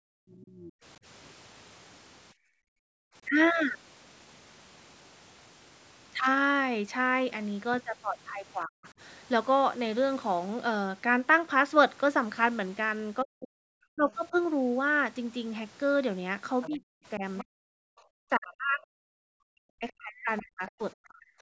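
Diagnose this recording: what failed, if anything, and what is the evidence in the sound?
The call processing stage is at fault here, specifically the echo canceller. In the first 3.0 s the room sound gets pushed down hard while the far end is playing out of the loudspeaker, dropping by as much as about 40 dB. About a second of that stretch is affected in total. That's background gated by the echo canceller: it clamps the mic whenever it thinks there's echo, then lets the ambience back in once it releases.

There's also the other side's voice leaking through. A faint second voice sits well under the talker from 0.29 to 0.72 s, roughly 20 dB down. It comes back for longer from 14.12 to 20.71 s, a bit stronger at roughly 15 dB below. The likely cause is the echo canceller not fully subtracting the loudspeaker signal from the mic, so residual far-end audio rides along with the near-end talker.

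Then there's speech suppressed in double talk, again likely the canceller's doing, as it gets confused when both ends talk and ducks everything. There's a slight dip of a few dB at 3.28 to 3.33 s. At 8.65 to 8.87 s the voice drops out deeply, near 40 dB. The big one runs from 13.24 to 21.26 s, with around three seconds of chopped, deeply suppressed speech scattered through it, overlapping that stretch of leaked far-end voice.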